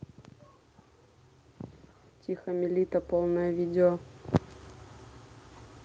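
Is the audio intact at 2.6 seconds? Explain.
No. At 2.6 seconds the clip is inside an automatic gain rising event that runs from 2.44 to 4.11 s. The gain control judged the incoming speech too quiet and pushed its gain up gradually, by about 7 dB over those 1.7 seconds. The voice and the background noise grow louder together in a smooth swell. A sudden level step would jump at once, and pumping would rise and fall with each syllable.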